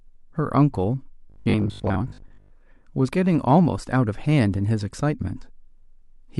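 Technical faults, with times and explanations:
1.30 to 2.50 s, robotic sound from repeated short buffers: The speech turns into a rigid, metallic buzz near 50 Hz that loosely tracks the speech. This likely comes from audio arriving too slowly, so roughly 20 ms chunks are replayed and about half the real sound is skipped.
1.84 to 1.88 s, damaged data in a compressed stream: A brief blip cuts into the buzzing passage. Corrupted bytes in the compressed data make the decoder misread those frames. It loses its place and must hunt for the next valid frame header before playback recovers.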